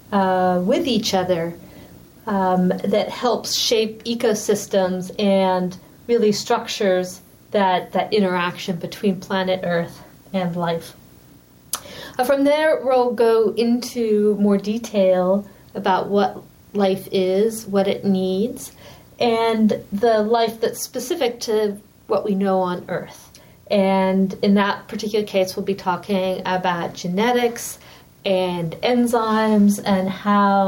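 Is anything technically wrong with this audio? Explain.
Yes, two faults run through the whole recording.

Video or display buzz is present from start to finish. A screen or video cable is coupling into the audio path, putting a buzz at the picture's field rate of 59.94 Hz under the sound, with hash above it and a thin, very high whine at the 15.7 kHz line rate. The interference sits about 30 dB below the wanted signal.

Gain pumping is also present throughout. The level ducks by roughly 5 dB each time a loud sound arrives, so the level seems to breathe. Loud and soft parts end up closer together and the sound feels squashed. The likely cause is input gain set far too high for the microphone, with a fast limiter or compressor clamping down on every peak.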